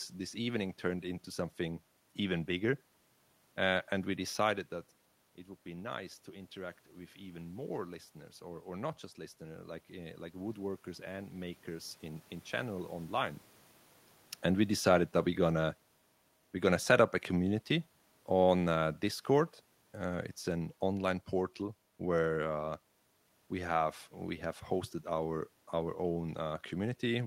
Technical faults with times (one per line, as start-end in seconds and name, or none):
5.65-12.91 automatic gain rising
14.59-19.64 automatic gain falling